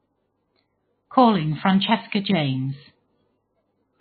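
Throughout the speech, nothing reaches above 4.5 kHz, and the sound is watery and swirly with smeared consonants, heavy damage that is likely MP3 compression at a very low bitrate, around 15 kbps. A spectrogram shows a flat ceiling at 4.5 kHz, with patchy, flickering holes below it.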